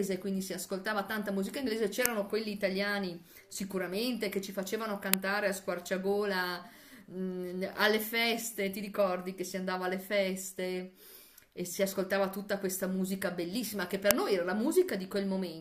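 At 2.06, 5.14 and 14.11 s, the speech is hit by a sharp, loud click of digital noise lasting about 0.67 ms, which fits a 32-sample block. This is an uninitialised buffer: leftover memory was played as sound before real audio was written.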